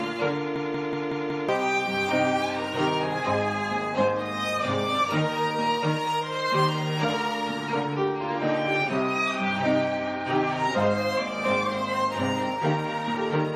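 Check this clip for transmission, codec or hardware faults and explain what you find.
One fault is present: a system hang loop between 0.56 s and 1.49 s. The same 186 ms fragment of audio plays five times in a row, producing a rhythmic stutter at about 5.4 repeats per second before normal playback resumes, with around a second of the original audio missing. The computer or its driver stalled while the sound hardware kept replaying the last ring buffer it held, which fits an 8192-sample buffer.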